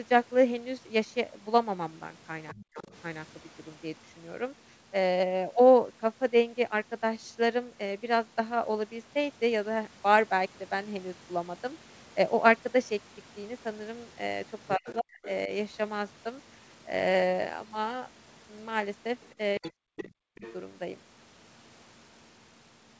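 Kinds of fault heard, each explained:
Other side's voice leaking through: a faint second voice sits under the talker near 2.5 to 3.0 s, 14.7 to 15.3 s and 19.2 to 20.5 s, roughly 15 to 25 dB down, likely loudspeaker echo left by the canceller; unlike background chatter, it appears around the same times as the dips.
Speech suppressed in double talk: at those same overlaps the talker's voice sinks sharply, around 40 dB at worst, in pieces totalling about 150 to 500 milliseconds per span, likely the echo canceller ducking both voices; unlike packet dropouts, the cuts follow the intruding voice.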